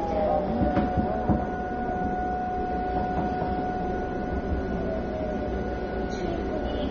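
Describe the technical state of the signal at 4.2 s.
At 4.2 s the sound is dull and smeared, with a warbling, fizzy texture in the sustained and hissy parts, as it is throughout the clip. This is likely AAC compression damage: a low-bitrate encoder, consistent with about 24 kbps, lowers the cut-off and leaves holes in the spectrum.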